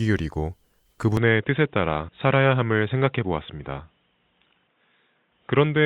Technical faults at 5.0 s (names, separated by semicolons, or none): input switched to a poorer device